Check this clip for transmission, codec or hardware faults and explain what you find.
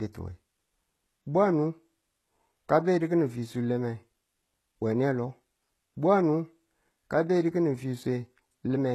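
One fault runs through the whole recording. Its likely cause is HE-AAC compression. Codec damage is plainly audible, and nothing sounds above 12.3 kHz. Only the lower spectrum is truly coded. The treble is rebuilt from copied lower bands, so harmonics misalign across the crossover. The s sounds turn gritty, metallic or lispy. The damage fits a bitrate around 16 kbps.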